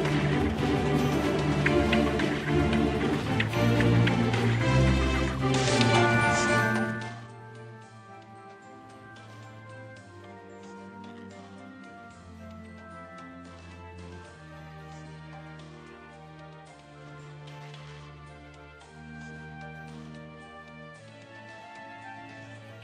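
From 6.58 to 7.32 s, rapid ticking rides a drop of roughly 25 dB. This is zipper noise, from unsmoothed 2 dB level steps about fifteen times a second.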